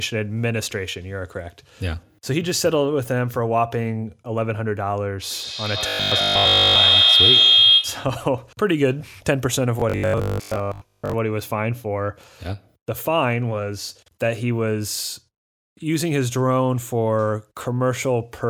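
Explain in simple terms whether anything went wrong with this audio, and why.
A feedback howl happened from 5.3 to 8.2 s. Two devices in the same room were on the call, so sound from a loudspeaker kept going back into a microphone and growing louder each time. It became a shrill tone around 3 kHz, louder than the voice and pulsing roughly every 150 ms.

Robotic sound from repeated short buffers shows up from 5.88 to 6.76 s and from 9.80 to 11.14 s. Fresh audio likely arrived too slowly, so the software kept replaying tiny 20 ms pieces in place of most of the real sound. That turns the voice into a stiff, metallic 50 Hz buzz.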